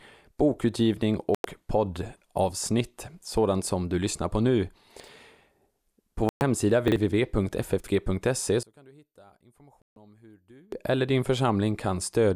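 At 1.35 s a digital broadcast dropout occurs: the receiver stopped getting valid frames and muted until clean ones returned. The speech cuts to silence for about 96 ms, consistent with four frames of 24 ms, and resumes on "poddavsnitt sådant som du". Whatever was transmitted in that gap is gone.

At 5.00 s, just after "du lyssnar på nu", chunks play out of order. A 40 ms block of audio arrived one chunk late and was slotted in after its successor. Nothing is lost, but the speech briefly jumbles at the hard joins. The same reordering of 40 ms blocks recurs at 6.88 s and 7.80 s.

Between the first two of those, a second dropout at 6.29 s mutes the sound for about 120 ms.

From 8.63 s to 10.72 s one channel appears inverted, likely a polarity reversal on one side of the stereo pair. When the channels are summed, the centred speech largely cancels and the level falls by about 29 dB. What remains is a faint residue until normal level returns on "eller din".

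Inside that stretch, a third digital broadcast dropout at 9.82 s silences the already weak signal for about 144 ms.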